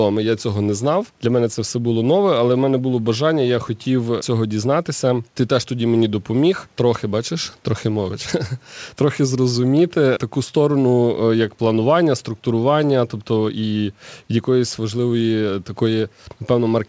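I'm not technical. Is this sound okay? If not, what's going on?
Yes, this speech recording sounds fine, with no problems.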